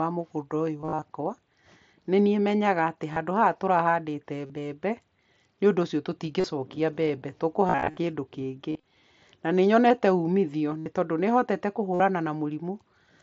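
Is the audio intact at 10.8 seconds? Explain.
No. Concealed Bluetooth headset packet loss occurs from 10.79 to 10.86 s, just after "na nĩ nyonete umithio". A short run of headset packets went missing. The receiver filled the gap by repeating recent waveform, giving a brief buzzy, steady tone and a slight warble as real audio resumes.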